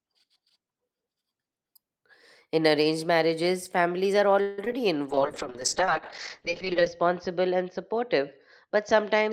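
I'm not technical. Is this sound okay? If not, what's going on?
No. At 4.41 to 4.59 s the speech stalls briefly into a fading buzz, then carries on. This call audio freeze likely came from delayed network packets.

At 4.65 and 4.72 s there are tiny smears or wobbles. This short concealed packet loss happens when the receiver patches missing scraps by stretching the sound just before them.

From 5.1 s to the end the speech turns muffled and rough. This call bitrate drop means the connection forced much coarser coding, cutting sound above 8 kHz.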